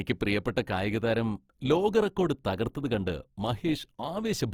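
From start to finish the speech carries a grainy, rough texture, most likely from Opus compression in its CELT music mode. Rather than leaving gaps in the spectrum, the encoder keeps each band's energy and fills starved bands with folded or noise-like content, so the speech turns hissy and coarse instead of swirling. The damage is plainly audible, which fits a low rate near 24 kbps, yet the band stays full, reaching up to about 20.2 kHz.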